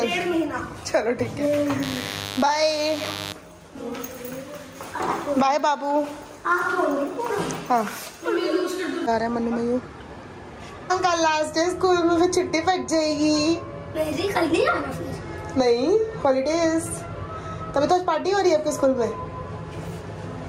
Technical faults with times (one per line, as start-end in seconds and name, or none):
0.00-20.49 gain pumping
1.82-3.32 mains buzz